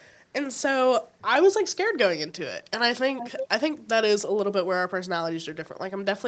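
Echo leak from 3.17 to 3.48 s: a faint second copy of the speech trails 347 ms behind, about 10 dB quieter. The likely cause is a loudspeaker at the other end whose sound reached its microphone and slipped past the echo canceller.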